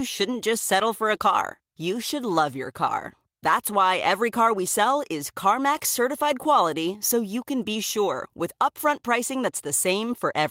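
Nothing goes wrong here at all; the speech runs its whole course without a single technical fault worth pointing to.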